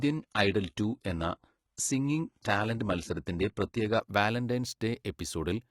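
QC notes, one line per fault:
0.0 to 4.0 s, adaptive stream starting at a low bitrate: the player opened on a low-rate version to start fast. Treble is thin and synthetic with nothing above 11.8 kHz, and codec artefacts are stronger, which fits roughly 16 kbit/s HE-AAC. At 4.0 s quality jumps cleanly, gap-free, to a fuller stream, which sounds like 96 kbit/s AAC-LC.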